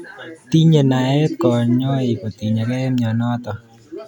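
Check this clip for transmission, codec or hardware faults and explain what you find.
Nothing in this speech recording points to a transmission, codec or hardware fault.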